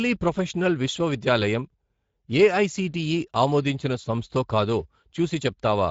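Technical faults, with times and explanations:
throughout: Speex codec. Plainly audible coding damage gives the speech a rough, hoarse graininess, because this CELP coder has too few bits to model the excitation. That fits a Speex setting near 17 kbps. A spectrogram shows nothing above 7.6 kHz and smeared, grainy harmonics below.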